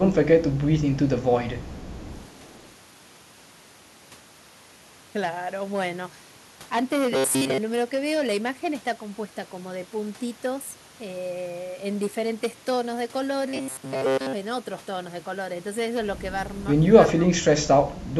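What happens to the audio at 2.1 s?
A faint, delayed copy of the speech trails it by about 0.42 s from 1.6 to 2.72 s, an echo leak likely caused by a far-end loudspeaker echo that the echo canceller did not fully remove. Peaks also crackle with a gritty edge from hard clipping, present throughout, where the level is driven about 11 dB past full scale and a small share of peaks are sliced flat.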